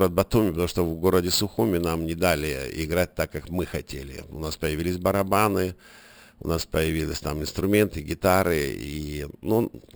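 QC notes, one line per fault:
Throughout: imaging from sample-and-hold upsampling. Each sample was just repeated with no smoothing, so a mirrored copy of the speech spectrum sits in the 6 to 12 kHz band, about 17 dB down, heard as a metallic fizz riding the voice. This fits audio originally at 12 kHz.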